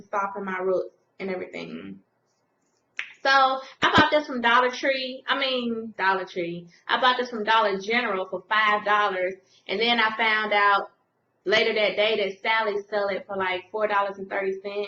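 Nothing goes wrong anywhere in this one, so there's no fault to point to at any moment.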